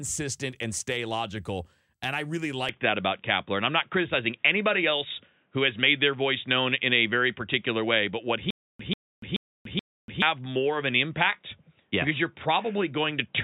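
Speech, and right after "I really" at 2.69 s the sound abruptly goes dull and boxy, with no gap at the change. This is most likely an input switched to a poorer device. On a spectrogram, everything above 3.8 kHz vanishes from that point to the end, a faint new noise floor appears well below the speech, and the waveform shows a level shift of around 5 dB. From 8.50 to 10.22 s there is a stutter with silent gaps, likely from a stalling stream. A 140 ms burst repeats four times, each followed by 290 ms of flat digital silence, giving a 429 ms cycle of identical blocks and empty stretches in the waveform.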